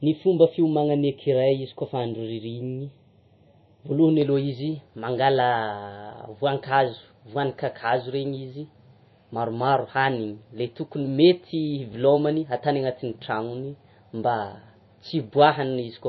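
Transcoding between lossy codecs is the likely cause of what runs through all 16 seconds. Nothing is heard above 5.8 kHz, and smeared, warbly coding artefacts sit on top of a second layer of swirl. This fits a low-rate MP3 pass followed by a WMA re-encode that spent its bits reproducing the first codec's damage and added its own.

Channel delay (comb filtering) affects 0.0 to 4.2 s. One channel lags the other by roughly a third of a millisecond, and summing them to mono cancels shared content at evenly spaced frequencies. The first notch falls around 1.5 kHz, which leaves the speech hollow and phasey.

Chunks out of order occur at 11.92 to 11.94 s. A 10 ms piece of audio plays one chunk later than it should, swapping places with its neighbour. No audio is lost, but the three hard joins produce a brief jumbled stutter.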